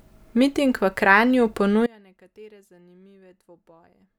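At 1.87 s the speech gives way to an audio dropout to a faint residue that lasts to the end of the clip. The cut is abrupt, not a fade or pause, and what remains is faint sound roughly 30 dB below the speech's normal level. The likely cause is the signal path losing the wanted source while staying live. On a waveform the envelope collapses instantly to a thin trace; a spectrogram shows the bands dimming sharply but persisting.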